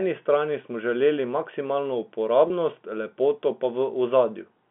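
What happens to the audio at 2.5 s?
A brief held, slightly buzzy sound at 2.48–2.50 s, just after "strani smo želeli maksimalno", is packet loss with pitch repetition: the receiver replayed the last pitch period across a 20 ms gap, fitting one lost packet.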